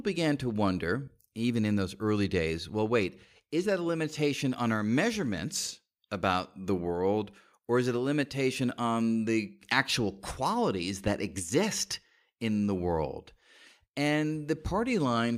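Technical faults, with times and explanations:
Listening through this speech recording turns up no technical faults. There is nothing here to place at a time or to explain.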